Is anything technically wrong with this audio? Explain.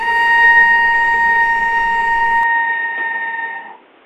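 Yes. From 2.43 s to the end, the input likely switched to a poorer device, capping the band at 3.8 kHz and adding noise about 30 dB down. The sound turns dull and boxy with no gap. The spectrogram shows the top cut off and a raised noise floor, and the waveform level stays steady.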